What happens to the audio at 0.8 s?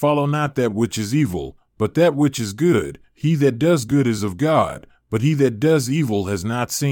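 Nothing goes wrong at 0.8 s; the speech continues intact through that moment.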